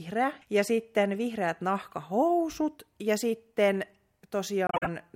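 Just after "sitten vihreät", from 1.82 to 1.94 s, a short, faint burst of chirpy, misplaced noise sits under the speech, peaking at roughly -40 dBFS. This is a corrupt frame decoded. Flipped bits in a few compressed frames, around three across those 0.12 s, were not caught, so the decoder trusted scrambled gains and codes and rebuilt energy at the wrong frequencies. The artefact lasts only as long as the damaged frames themselves.

At 4.67 s the speech drops abruptly into silence and returns at 4.88 s, leaving a clean hole of about 0.21 s while the surrounding timing stays intact. This is a corrupt frame muted. Here the damaged frames were rejected by the decoder rather than played, and the player inserted silence in their place. The hole's length points to a run of about six consecutive frames being discarded.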